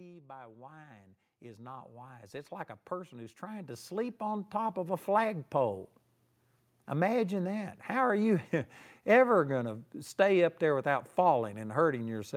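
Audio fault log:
0.17–5.04 s, automatic gain rising: the gain control judged the input too quiet and raised its gain by about 20 dB over nearly five seconds, so speech and background swell together.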